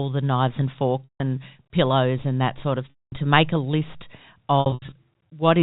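Around 1.04 s, 2.9 s and 4.6 s you get packet loss with pitch repetition: the receiver loops the last pitch period to fill the gaps (160 ms, then 220 ms) and fades it out, so each sounds held and buzzy before dropping to silence. The last is scattered loss over 320 ms, with runs of up to 80 ms.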